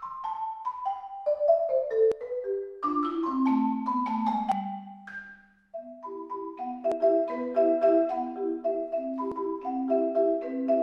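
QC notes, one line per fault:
2.12, 4.52, 6.92 and 9.32 s: audio missing between chunks. The sound skips at a steady 2.4 s interval, each time losing roughly a tenth of a second and splicing the two sides together without a gap, likely from a recorder dropping audio at 2.5 s chunk boundaries.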